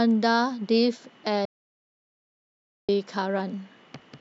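At 1.45 s the speech cuts off abruptly into silence and resumes mid-flow at 2.89 s. This is an audio dropout to silence lasting 1.43 s. The input was likely lost while recording carried on. Unlike a natural pause, no room tone remains.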